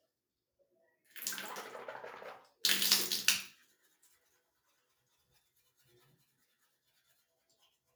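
Everyday sounds with two stretches cut by the noise suppressor. From 3.64 to 4.39 s and from 5.57 to 5.98 s, steady content dips by about 10 dB, mistaken for noise. The waveform envelope sags and the spectrogram shows faded bands there, roughly half a second and a fifth of a second in total.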